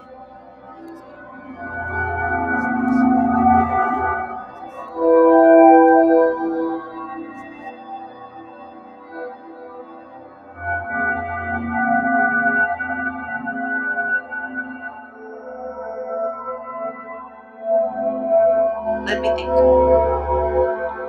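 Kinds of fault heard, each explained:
Noise suppressor applied to music or sounds: A speech-oriented noise suppressor was left running over audio that isn't speech, so it treats sustained tones, ambience and decaying tails as noise to be removed. Across the whole clip its gain keeps shifting, with attenuation swinging by roughly 15 dB. The sound pumps and thins as the processor repeatedly decides parts of it are unwanted. Sharp onsets pass more intact than whatever follows them.
Sound cut by the noise suppressor: At specific moments the suppressor judged the material to be noise and pulled it down well below the surrounding level. This happens from 0.0 to 1.56 s, 4.41 to 4.97 s, 6.8 to 10.61 s, 14.21 to 15.64 s and 16.92 to 17.65 s, with drops of about 9 to 11 dB. The longest stretch lasts several seconds. Held and fading sound sinks there, and its decay is clipped short.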